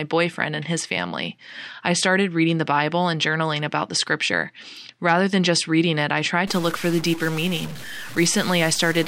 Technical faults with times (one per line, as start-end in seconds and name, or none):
6.47-9.08 stuck bit